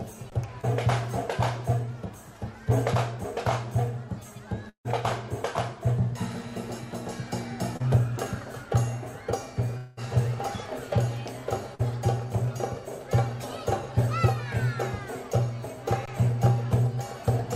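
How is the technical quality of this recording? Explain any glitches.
The recording has a handful of short delivery glitches, all brief breaks in the audio stream.

There are two underruns with held sample, at 0.30 to 0.32 s and 16.06 to 16.08 s. The output buffer ran dry, so the converter held its last value. You hear a flat 20 ms stall, and roughly 20 ms of live audio went missing.

There are three short concealed packet losses. At 0.61 to 0.65 s, 20 ms was lost. At 7.77 to 7.90 s, 40 ms was lost, with about 15 ms of extra stretch added. At 11.75 to 11.81 s, 40 ms was lost. Each time the decoder patched the hole by extending the preceding sound and then blended back, which you hear as a quick smear or wobble.

There are two longer gaps, at 4.69 to 4.87 s and 9.77 to 9.99 s, likely long network dropouts, with 160 ms and 200 ms missing. In the first, about 150 ms of fading continuation gives way to roughly 100 ms of silence. 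In the second, the fill covers nearly the whole gap with no silence. In both, the audio then jumps ahead without the lost part.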